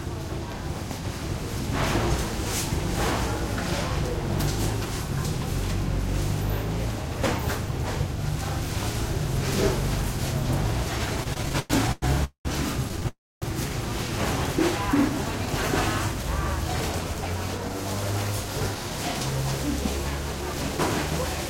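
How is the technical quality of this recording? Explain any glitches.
The recording has clear network-delivery glitches: a cluster of stutters and freezes between about 11.2 and 13.4 s, then two stretches of sped-up playback near the end.

Repeated stalls (stutter), 11.23 to 12.04 s and 12.89 to 13.06 s. Packets arrived late or too slowly, so the receiver's jitter buffer kept running dry. Each time, it stretched the last sound forward until fresh audio came. The first stretch has nine gaps filling 308 ms, the longest 105 ms, so 38% of that span is held-over sound. The second has five short gaps totalling 55 ms. Nothing is lost, but the sound drags and catches.

Call audio freeze, 12.24 to 12.47 s and 13.08 to 13.44 s. The sound halts and the last fragment trails off into silence before resuming exactly where it stopped. The first freeze adds 208 ms, 110 ms of it silent. The second adds 333 ms, with 260 ms of silence. 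The likely cause is packets held up in transit, emptying the buffer, with each freeze adding an equal amount of delay to everything after it.

Jitter buffer speed-up, 17.14 to 18.98 s and 20.32 to 21.45 s. Having built up excess delay, the receiver trims it by repeatedly cutting tiny pitch-period-sized slices from the audio. Pitch stays the same, but the first stretch plays about 6% fast, removing roughly a tenth of a second. The second runs about 3% fast, shedding a few hundredths of a second. The first sounds slightly hurried.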